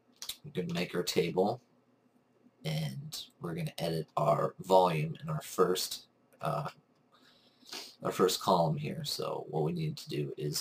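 From start to finish the audio carries crude rate conversion: samples were dropped or repeated to change the rate without a proper filter, which fits a conversion from 48 kHz to 44.1 kHz. The resulting error, roughly 25 dB below the signal, forms inharmonic, shifted copies heard as a gritty fizz tracking loud and high sounds. Unlike clipping, it is not confined to peaks, and unlike codec swirl, its pattern stays fixed by the two rates.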